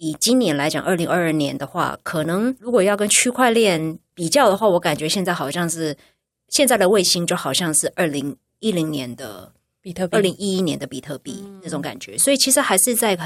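No technical faults can be heard anywhere in the speech.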